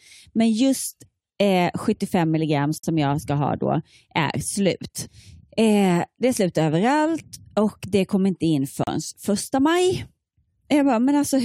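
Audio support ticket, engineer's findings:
Gap at a join of encoded pieces, 2.78–2.84 s and 8.84–8.87 s, about 54 ms and 37 ms, recurring every 6.0 s. Speech drops to silence with smeared edges, then resumes where it stopped. Segments encoded separately, concatenated untrimmed; encoder start delay and final-frame padding left in.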